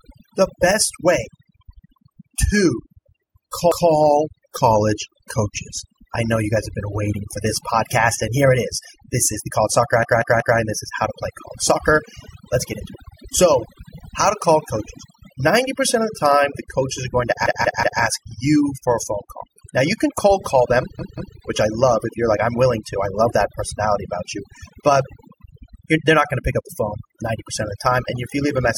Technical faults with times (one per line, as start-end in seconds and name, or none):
0.00-28.78 overdone noise removal
3.72-3.90 repeated buffer
10.03-10.59 repeated buffer
17.46-18.02 repeated buffer
20.99-21.36 repeated buffer